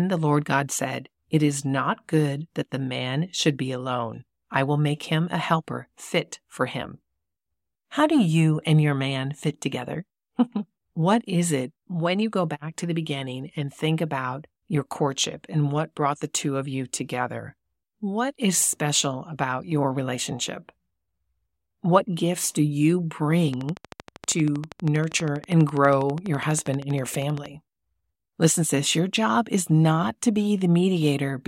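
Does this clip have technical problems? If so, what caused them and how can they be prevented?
Yes. From 23.54 s to 27.47 s a train of clicks sits over the speech: sharp, near-identical ticks at a regular 12.5 per second, about 50 in total, peaking roughly 10 dB above the speech and audible in the pauses as well. The steady rate and identical shape point to a repeating electrical pulse, likely interference from nearby equipment or a faulty connection or power supply. Prevention: keep cables away from switching equipment and use a stable, properly powered interface.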